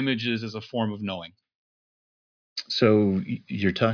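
No technical faults can be heard anywhere in the recording.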